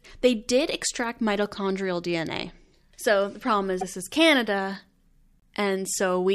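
At 3.80 to 3.83 s, just after "the problem", and again at 5.40 to 5.42 s, the speech skips ahead and a brief glitch replaces it. This is likely a broken MP3 bit reservoir: frames went missing, and the next frame pulled its borrowed data from the wrong bytes. Each glitch lasts roughly one 26 ms MP3 frame.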